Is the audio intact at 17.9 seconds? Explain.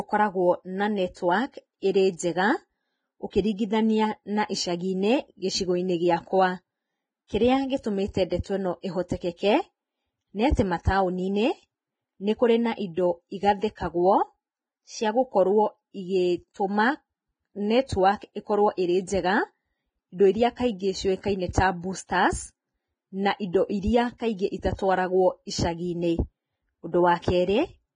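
No. A sharp onset at that point lands late in one of the codec's transform blocks, and the quantisation noise, sized for the loud attack, gets spread across the whole block, including the quiet stretch just before it. The result is pre-echo from about 17.86 to 17.89 s: a short hiss of roughly 27 ms leads into the attack, which itself sounds softened and smeared rather than crisp.

Around that moment, and through the rest of the speech, the cause is likely heavy Vorbis compression at a low rate, which fits a bitrate of roughly 20 kbps. The encoder keeps only a coarse spectral outline and quantises the upper detail so roughly that it turns into noise. Nothing remains above 9.7 kHz, and what is left in the treble sounds hissy and grainy, with roughened tones and blurred consonant attacks.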